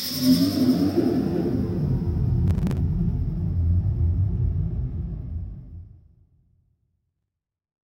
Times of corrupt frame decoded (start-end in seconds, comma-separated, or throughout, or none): none